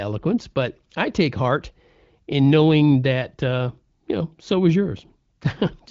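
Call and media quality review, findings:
No findings in this call and media quality review; the speech comes through the AMR wideband (HD Voice) codec at a rate that fits 15.85 kbit/s, with nothing above 7.5 kHz.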